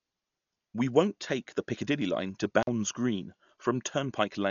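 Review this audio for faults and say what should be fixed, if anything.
The whole clip has a dull, band-limited quality and a rough, fluttery noise around the speech tones. That's most likely heavy Dolby Digital compression: the encoder narrowed the band and filled starved frequency lines with dither noise, which fits a low rate around 48 kbps. Re-encode from the original at a much higher bitrate, or use a lossless source.

At 1.34 s there's a single sharp click, a thin line straight up the spectrum. It sounds like a couple of dropped samples, so the waveform jumps ahead a fraction of a millisecond and leaves a step, though no audible sound goes missing. Check the capture chain for buffer underruns so the stream never skips samples.

Between 2.61 and 2.69 s the sound cuts out with crackle on both edges, and the line goes open for about 45 ms. That's an intermittent contact, a loose cable or plug breaking the connection for a moment. 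Reseat or replace that connector and secure the cable so it can't move.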